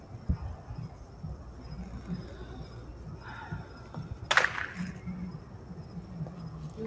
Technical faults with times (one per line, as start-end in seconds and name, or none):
0.00-6.86 noise suppressor applied to music or sounds